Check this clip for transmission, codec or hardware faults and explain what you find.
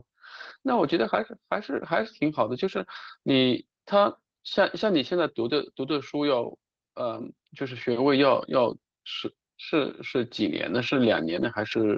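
Nothing stood out on listening, and the speech carries only the narrower, call-like sound expected from a WebRTC call path.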